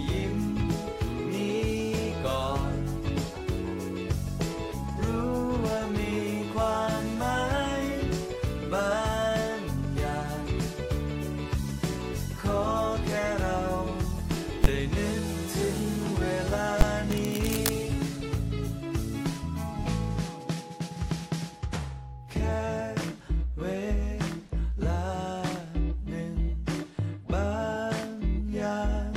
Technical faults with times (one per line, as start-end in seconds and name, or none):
14.64 invalid numbers at full scale
16.81 invalid numbers at full scale
17.12-17.72 cable scratch noise